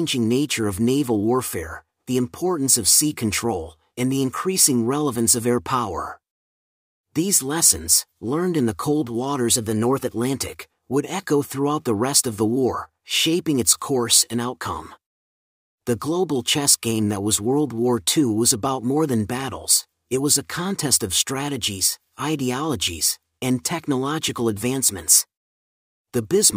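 At 9.51 to 10.08 s and again at 25.17 to 25.89 s the speech briefly runs about 6% fast and rises roughly a semitone, then snaps back to normal: a drift correction step, likely clock-matching software abruptly changing playback rate to drain or refill its buffer.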